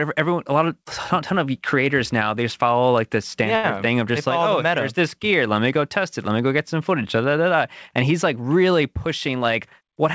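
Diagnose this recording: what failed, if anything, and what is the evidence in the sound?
Network and jitter buffer stage. Right after "just follow like the", at 3.56 to 3.66 s, a sound gets held and stretched for about 77 ms with a slight buzz or dip. That's a short stall from a late packet: the buffer ran dry and the receiver filled the gap, so nothing's lost, just 77 ms of added delay.

Same stage, the other direction. After "he's like really", from 9.06 to 9.91 s, the speech runs about 105% speed at unchanged pitch and sounds a bit rushed. That's a jitter buffer speed-up: it trimmed pitch-period slices, about 50 ms in total, to burn off the excess delay.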